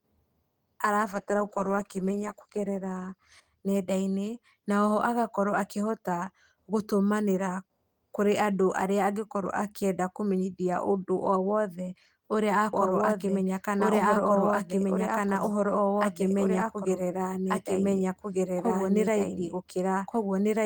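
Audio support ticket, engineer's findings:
Call bitrate drop, 1.15–3.77 s: bandwidth estimate fell, encoder cut from 32 to 14 kbps, bottoming out about 1.5 s. Speech turns coarse, watery, high end muffled.

Doubled audio track, 12.73 s to end: full-band copy lags roughly 1.5 s at about equal level, starting abruptly, no decay. Likely a second, slower capture path mixed in.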